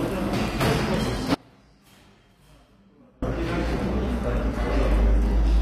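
From the start, the treble sounds gritty and metallic, and nothing reaches above 15.4 kHz. This is likely HE-AAC compression at a low bitrate, around 24 kbps. The top band is rebuilt from copied lower bands, so its detail does not match the original.

At 1.35 s the sound cuts out abruptly. Until 3.22 s, about 1.9 s later, only a faint leak remains, far below normal level. Then the sound returns just as suddenly. This is an audio dropout to a faint residue. The signal was likely lost upstream while the path after the break stayed live.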